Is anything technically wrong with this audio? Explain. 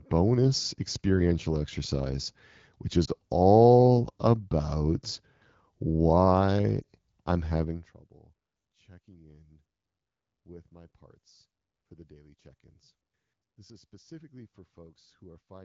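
Yes. Two brief warbling dips, at 3.05 to 3.11 s after "experiential exercise which" and at 6.82 to 6.84 s after "all about why", are lost AMR speech frames. Each fits one corrupted 20 ms frame that the AMR-WB decoder concealed by reusing the previous pitch and vocal-tract settings at reduced gain.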